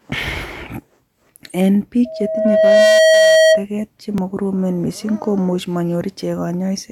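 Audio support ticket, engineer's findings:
Loudspeaker feedback squeal, 2.05–3.65 s. Steady 640 Hz tone swells over roughly 0.7 s to about 10 dB above the speech. Mic picking up its own loudspeaker; loop gain above unity at 640 Hz, tone self-reinforces until loop breaks.

Overlap between stream segments, 4.18–4.20 s. Micro-skip, about 20 ms of audio missing, waveform jumps. Probable cause: player trimming overlapping timestamps at a segment join, which fits 2-second segments; non-duplicated audio discarded.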